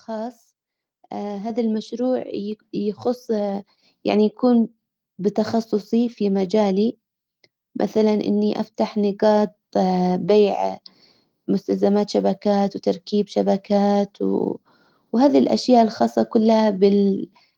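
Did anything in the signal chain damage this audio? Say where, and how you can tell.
Yes. At 1.5 s the speech and the background noise jump up together by about 5 dB, just before "المشروع يخص". This is the microphone volume stepped up: call processing judged the input too quiet and raised the device's input gain in a single step.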